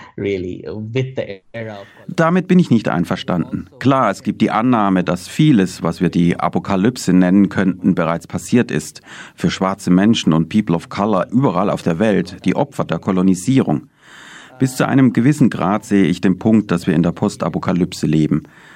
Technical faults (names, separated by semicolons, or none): none